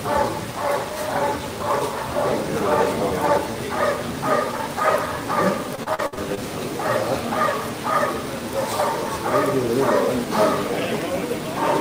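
From 5.75 s to 6.42 s there is repeated packet loss, with a robotic sound. Six gaps hit this stretch in quick succession. The longest lasts 59 ms. Each time, the receiver patches the hole by stretching out the last audio it had. That rebuilt material makes up about 31 percent of the span. The sound turns choppy. Pieces drop out and are filled in, with roughly 20 ms of that fill only crudely rebuilt.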